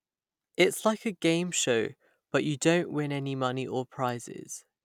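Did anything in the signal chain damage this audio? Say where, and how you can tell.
No, nothing in the signal chain stood out as having damaged this speech on listening.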